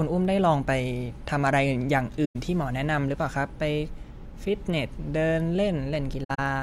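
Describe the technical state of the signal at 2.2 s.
Right around there you hit an AAC frame loss with muting, running from about 2.25 to 2.36 s. A short run of frames never reached the decoder, so it zeroed their spectrum, and the overlapping transform windows fade the speech down into silence and back up. You hear a soft-edged dropout of roughly 0.11 s, a brief hole in the speech rather than a hard cut. That length fits about five lost frames.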